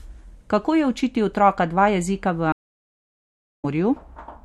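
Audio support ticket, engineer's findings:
Stream reconnect, 2.52 to 3.65 s, after "otroka dva jezika v". Dropout of 1.03 s silence. Speech resumes about 0.7 s further on, material skipped. Player/network layer: connection lost, re-established, new decoder started mid-stream on live feed.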